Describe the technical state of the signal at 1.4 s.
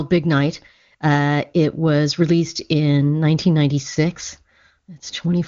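At 1.4 s the speech is intact, carried by the AMR wideband (HD Voice) codec at 23.85 kbit/s with no content above about 7.1 kHz.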